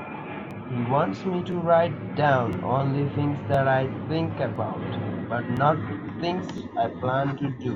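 A click or stutter breaks into the speech about once a second, at 0.51, 1.52, 2.53, 3.54, 4.56, 5.57 and 6.58 s. These are overlapping chunks. The audio was handled in 1.0 s blocks, and each block begins 12 ms before the previous one finished. That sliver plays twice at every join, which is why the gaps between the clicks run slightly longer than a second.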